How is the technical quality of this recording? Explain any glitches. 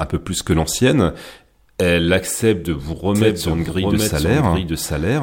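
From 3.15 s to the end, the speech is heard twice: a second, equally loud copy trails the original by roughly 0.7 s, so each phrase is overlaid with its own repeat. The copy cuts in abruptly and carries no decay or room colour, unlike a natural echo. This is a doubled audio track, most likely from the same signal reaching the mix a second time through a slower path, or an edit holding two out-of-step copies.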